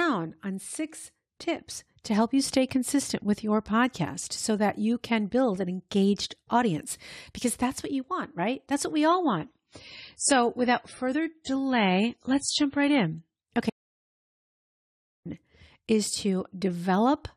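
A speech clip with two faults. From 9.08 to 13.08 s, just after "what we", an adaptive stream at a lower bitrate takes over when the connection slows. The treble vanishes above 10.5 kHz and codec artefacts rise, which points to a drop from around 128 kbit/s to around 24 kbit/s MP3, with no gap at either switch. Then, from 13.70 to 15.25 s, an audio dropout to silence, most likely from the input being lost while the recorder kept writing silence, cuts the speech off mid-flow for about 1.56 s of silence with no room tone.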